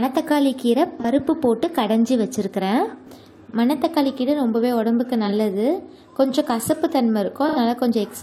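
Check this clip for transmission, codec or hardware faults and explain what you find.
The clip has one fault: AAC frame loss with concealment, at 1.00 to 1.05 s, 5.26 to 5.32 s and 7.48 to 7.58 s. The decoder rebuilt missing data from the last good spectrum. The first two gaps last about 43 ms, fitting one lost frame. The third lasts about 85 ms, fitting two. Each sounds like a brief smeared, noisy patch.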